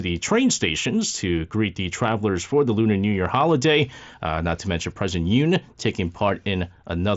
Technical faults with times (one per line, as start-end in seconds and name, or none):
none